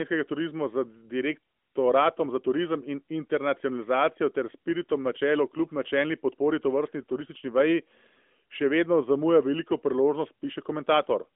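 Nothing in this speech stood out as a technical fault on listening.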